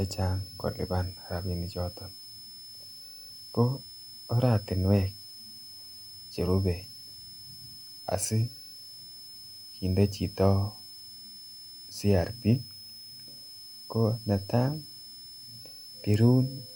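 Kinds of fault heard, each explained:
Switching supply whistle: A high, steady whistle sits under the speech for the whole clip. It comes from a switching power supply running in an audible burst mode, or from two supplies beating against each other. Its pitch is around 5 kHz and wanders between 5.19 and 5.27 kHz. The whistle is roughly 20 dB below the speech.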